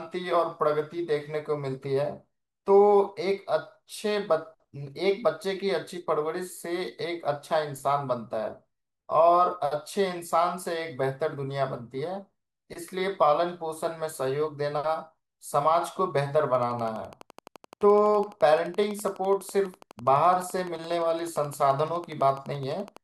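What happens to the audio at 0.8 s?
Nothing goes wrong at 0.8 s; the audio is intact at that moment, with no dropout, click, distortion or other fault.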